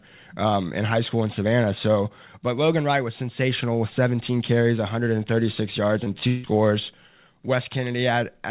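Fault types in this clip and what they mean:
Short concealed packet loss: at 6.04 to 6.08 s and again at 6.20 to 6.23 s, about 20 ms of audio arrived too late to decode each time. The receiver bridged each gap by extending the preceding sound, leaving a brief smear or wobble before real audio resumes.
Long network dropout: from 6.27 to 6.46 s, roughly 0.16 s of audio is missing, likely because nothing reached the receiver. Concealment fills about 0.17 s of the gap with a fading continuation of the last sound, never reaching silence, and the audio resumes without the missing stretch.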